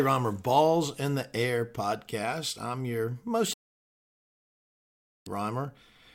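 At 3.54 s, right after "podcast I'm your most", the speech hits a digital broadcast dropout: the receiver stopped getting decodable frames and muted its output until valid ones returned at 5.27 s. Roughly 1.7 s of programme is simply gone, so the speech drops out and resumes mid-flow. On a waveform this is a near-flat line of silence; a spectrogram shows a clean, empty vertical band across all frequencies for that stretch.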